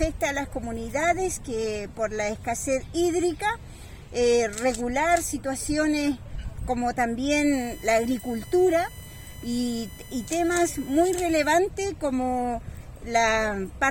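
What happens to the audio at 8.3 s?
At 8.3 s the audio carries USB whine, running from 7.53 to 11.56 s: a fixed tone on a 1 kHz series, strongest at 2 kHz, sitting roughly 20 dB under the sound. It comes from the bus's 1 ms frame current leaking through power or ground, unlike mains hum's 50 or 60 Hz buzz.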